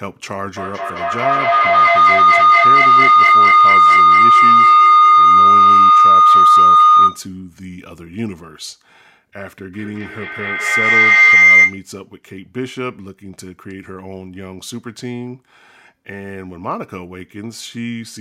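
Feedback howl appears in this speech clip at 0.57–7.34 s and 9.73–11.92 s. A loudspeaker-to-microphone loop gains level on each pass, repeating roughly every fifth of a second and building tones near 1.5 kHz and then 2 kHz that reach about 16–17 dB above the speech.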